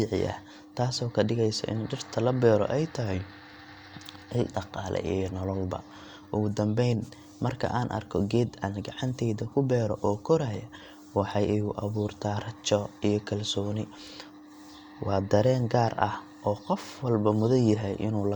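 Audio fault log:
Nothing stood out on listening to this speech recording.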